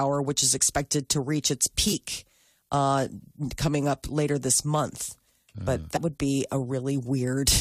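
At 1.92 s, just after "expected to reach its", the speech breaks briefly from damaged data in a compressed stream. Corrupt bytes made the decoder misread the frame there, and it lost sync until it found the next valid header. A second blip runs from 5.96 to 5.98 s, right before "would be". On a spectrogram each shows as a thin vertical break in the speech pattern. In the waveform it is a short disruption that doesn't match the surrounding envelope.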